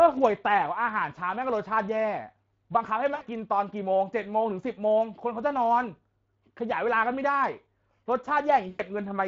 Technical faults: Speex codec; VoIP packet loss concealed by the speech codec

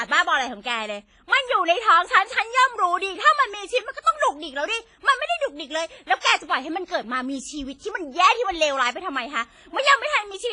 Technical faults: WMA compression

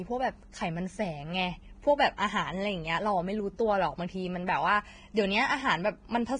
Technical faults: Vorbis compression

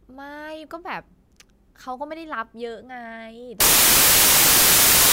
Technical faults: samples built from the wrong bytes

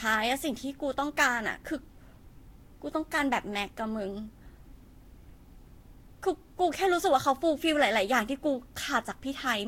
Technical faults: generation loss

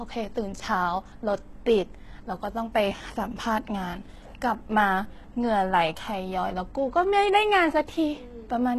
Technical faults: HE-AAC compression

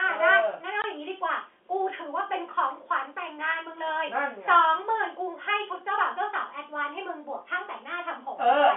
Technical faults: packet loss filled with silence

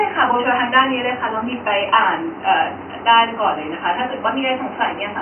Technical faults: none

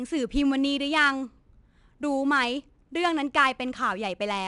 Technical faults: 4-bit ADPCM compression

